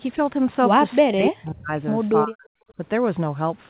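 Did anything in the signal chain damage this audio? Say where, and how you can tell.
Yes. At the call processing stage, the speech drops out sharply from 1.05 to 1.76 s and again from 2.24 to 2.48 s, falling by about 40 dB. This is likely speech suppressed in double talk. The echo canceller could not separate the talker from the loudspeaker echo, so it attenuated both.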